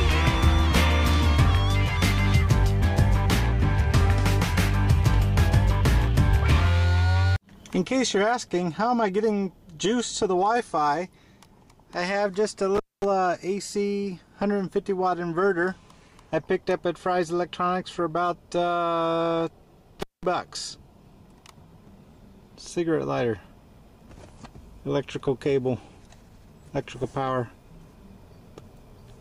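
Intermittent contact at 12.75 to 13.05 s and 20.00 to 20.25 s: a loose connection briefly opens, dropping the sound for 226 ms, then 198 ms, with crackle at each edge and faint hiss between.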